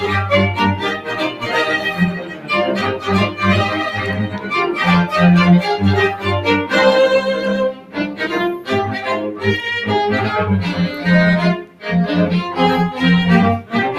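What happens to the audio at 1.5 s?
Around 1.5 s, a sound is cut by the noise suppressor from 1.30 to 1.49 s, just ending at the moment you asked about. For roughly a fifth of a second, the suppressor judges this part of the audio to be noise and pulls it down harder than its surroundings, by about 7 dB at the deepest point. The result is a brief sag or hollowing in that sound.

That dip belongs to a broader fault: a noise suppressor applied to music or sounds, running across the whole clip. It was built for speech, so it treats steady, held material and lingering tails as unwanted noise and keeps turning them down, with its gain swinging by around 10 dB. Onsets pass mostly untouched while what follows sinks, which gives the sound an unsteady, pumping, thinned-out character. The event near 1.5 s is one of its bites.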